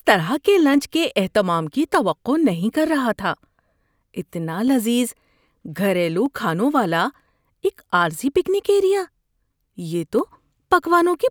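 Single sharp clicks at 0.74, 1.95, 4.68, 6.26 and 10.19 s are likely dropped samples. A fraction of a millisecond is missing, so the waveform jumps abruptly.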